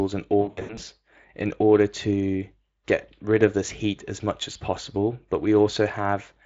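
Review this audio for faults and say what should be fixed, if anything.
There's VoIP packet loss concealed by the speech codec in two spots. From 0.41 to 0.80 s, just before "in order to", about 240 ms of audio goes missing in bursts up to 80 ms long. The decoder keeps stretching its last pitch and filter shape with falling gain, so the sound turns into a buzzy tone or coloured noise that fades, and it stays thin for a bit after packets resume. A shorter 20 ms dropout comes at 4.53 s, right after "this heat as much". Adding jitter buffering with forward error correction or redundancy would prevent this.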